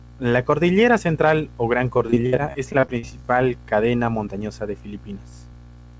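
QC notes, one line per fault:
1.98–3.05 s, repeated packet loss (robotic sound): the speech turns choppy and robotic, with chunks missing. About a dozen short dropouts, the longest 61 ms, were each bridged by stretching the previous sound, so roughly a quarter of this stretch is concealment rather than real audio.
3.05–3.24 s, jitter buffer slow-down: the speech drags briefly, running at about 80% speed with unchanged pitch and drawn-out sounds. The receiver repeated single pitch periods to rebuild its reserve, adding 47 ms to this segment.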